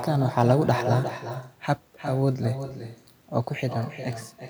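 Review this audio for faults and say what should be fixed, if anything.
There's echo with no canceller throughout: every bit of speech comes back about 9 dB down, roughly 400 ms later, and thinner. The far end's loudspeaker feeds its mic. Switching on echo cancellation at that end, or using headphones, would fix it.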